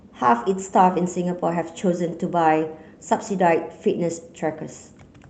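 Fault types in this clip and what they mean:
No fault types are present in this clip, so there is nothing to explain about what they mean.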